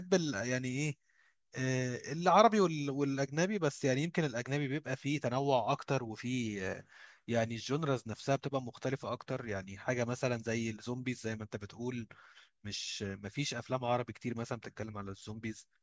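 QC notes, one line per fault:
No technical faults were heard anywhere in the speech recording, and the signal gives nothing that calls for a QC note.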